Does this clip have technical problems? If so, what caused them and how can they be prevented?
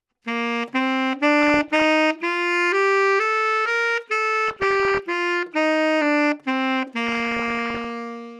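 Yes. DAB burbling from weak reception: bit errors slipped past error correction into the MP2 data, putting short blips of noise in single sub-bands. This produces burbling at 1.42–1.84 s, 4.47–4.99 s and 7.07–7.90 s, the later two from heavier errors. Better antenna placement or a stronger multiplex signal prevents it.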